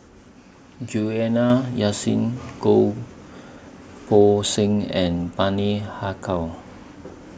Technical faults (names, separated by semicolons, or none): microphone volume stepped up